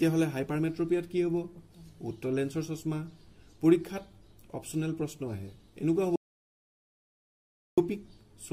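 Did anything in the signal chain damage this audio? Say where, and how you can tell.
Yes. There is an audio dropout to silence from 6.16 s to 7.78 s, about 1.6 s long. The sound cuts off mid-flow and returns just as abruptly. The gap is silent, with no room tone or noise floor underneath. That rules out a quiet passage. The recorder kept writing samples while its input carried nothing. The likely stage is the input side, through a dropped device link, a loose cable or a brief mute. Whatever happened in that stretch is lost.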